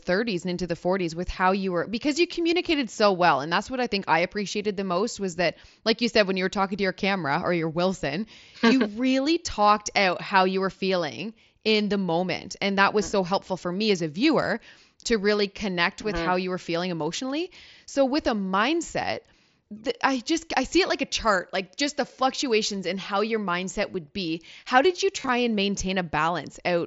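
Concealed Bluetooth headset packet loss hits this speech clip from 25.18 to 25.29 s, just after "did you": roughly 67.5 ms of audio lost across about 105 ms, consistent with around nine dropped headset frames. The phone patched each gap by repeating the closest-matching recent waveform, so with the longest run only 22.5 ms the fill comes through as brief buzzy, held fragments with a slight warble as real audio resumes, carried over an mSBC wideband link with light codec grain.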